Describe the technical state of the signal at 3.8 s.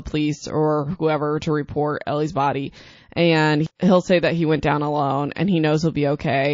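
An encoder that never switches to short blocks spreads quantisation noise across a long 72 ms window, so pre-echo appears from 3.75 to 3.80 s: a hiss about 13 dB louder smears 44 ms ahead of the attack. Throughout, the sound is watery and dull-topped with swirling highs, likely from MP3 compression at a low bitrate, which fits roughly 32 kbps.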